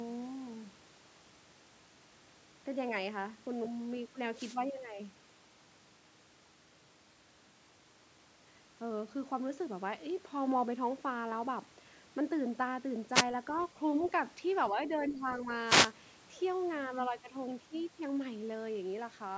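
At 4.32 to 4.59 s a wireless microphone noise hit comes through as a brief swish of static. The analogue FM radio link fades as reflected paths cancel, and receiver noise rises.

From 13.12 to 13.25 s a second, shorter noise hit follows. Right after it, at 13.52 to 13.67 s and 14.02 to 14.07 s, the other side's voice is leaking through as faint scraps roughly 25 dB below the talker. This is likely loudspeaker playback that the echo canceller left in the microphone signal.

At 14.71 to 14.91 s and 15.09 to 15.49 s there is speech suppressed in double talk. The talker's level dips by a few dB at first, then by about 10 dB. The likely cause is the echo canceller turning everything down while both ends speak.

A third noise hit, at 15.64 to 15.93 s, adds another burst of static.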